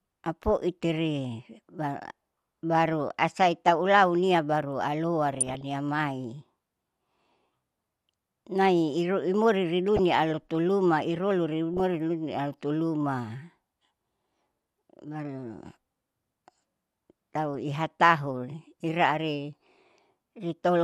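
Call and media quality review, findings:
DAB burbling in the speech, five short bursts: 0.42–0.46 s, 2.86–2.93 s just before "asaita ulaunia", 5.34–5.61 s (longest), 9.96–9.99 s right after "nai iruimuri", 11.74–11.80 s. Short noise blips over the programme. Component: DAB receiver / MP2 decoder. Mechanism: weak reception lets a small residual bit error rate, well under 1%, slip past error correction. Corrupted samples put short noise blips in single sub-bands; corrupted scale factors make sub-bands jump in level for up to a frame.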